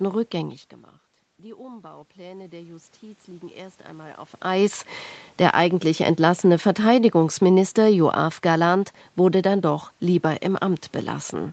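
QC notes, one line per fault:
1.57–4.82 s, automatic gain rising: after the level drops by about 19 dB, the voice and the room noise behind it swell together, slowly and steadily, over roughly three seconds. The gain control sensed a quiet input and raised its gain by about 7 dB in gradual steps rather than at once. Because it amplifies everything reaching the microphone, the background rises in step with the voice.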